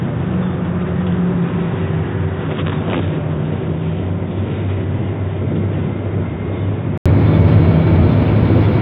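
From the start to 7.06 s, the everyday sounds arrive through a narrow, boxy channel with nothing above 3.8 kHz, running roughly 10 dB quieter and carrying a faint background noise of its own, well below the signal. At 7.06 s there is an 80 ms gap, after which the full bandwidth and level return. This pattern is likely an input switched to a poorer device, such as another microphone or a headset call profile, before the system reverted.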